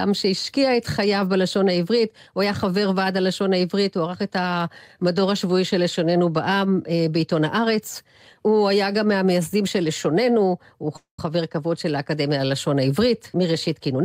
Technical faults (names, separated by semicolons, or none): call audio freeze; jitter buffer speed-up